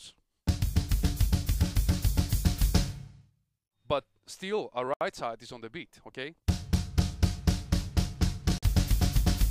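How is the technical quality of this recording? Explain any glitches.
The recording has two brief dropouts. At 4.94 to 5.01 s the audio cuts to silence for 71 ms, and at 8.58 to 8.63 s for 45 ms, then resumes. This pattern is likely a Bluetooth stall: interference delayed packets, the receiver's buffer emptied, and playback paused until retransmitted data arrived.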